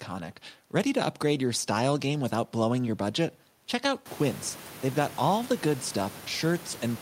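The speech recording shows no technical fault in the signal chain; the background noise of the room, which climbs by about 20 dB at around four seconds yet stays about 20 dB beneath the speech, belongs to the recorded space rather than to the system.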